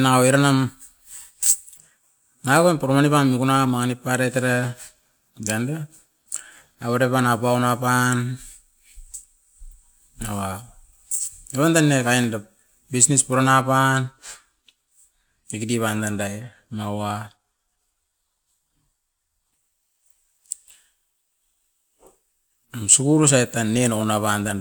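A click recurs every 1.83 s through the speech, from 1.23 s to 23.23 s, about fifteen in all. These are clock drift buffer slips, likely from two devices whose clocks disagree by around 100 ppm, so a handful of samples gets dropped or repeated each time.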